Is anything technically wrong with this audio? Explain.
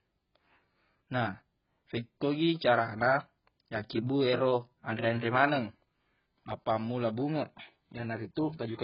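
Yes. Heavy AAC compression, likely at a low bitrate around 12 kbps, strips everything above 5.5 kHz throughout, leaving the speech dull, smeared and warbly.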